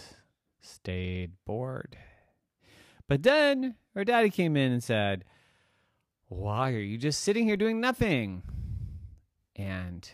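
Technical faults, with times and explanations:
7.56 s, DC step: the waveform's zero line jumps by about -41 dBFS, giving a single low thump that a 20 Hz high-pass then lets drain away. Unlike a click or dropout, the speech itself continues unbroken; only the baseline shifts.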